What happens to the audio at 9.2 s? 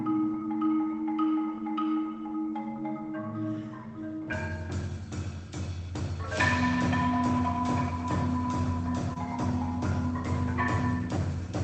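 A short concealed packet loss occurs from 9.13 to 9.18 s. Roughly 20 ms of audio never reached the decoder in time, and the receiver filled the gap by extending the preceding sound before blending back, so the moment comes across as a brief smear or wobble.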